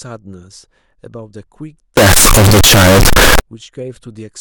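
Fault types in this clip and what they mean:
Float read as integer: From 1.97 to 3.40 s the speech turns loud, harsh and square-edged. Likely 32-bit float samples decoded as 32-bit integers.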